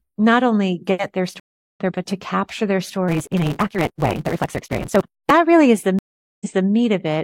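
Speech that twice drops out: a 360 ms gap at 1.40–1.80 s after "not only get their" skips about a third of a second, resuming at "there but to capture," and a 417 ms gap at 5.99–6.68 s jumps back 279 ms. This is a stream reconnect, where a restarted decoder picks up mid-stream. From 3.08 to 5.31 s, after "but to capture their," a 172 Hz buzz sits under speech rushed 1.88 times faster. This is a truncated block size mismatch, consistent with 256-sample reads discarding each block's tail.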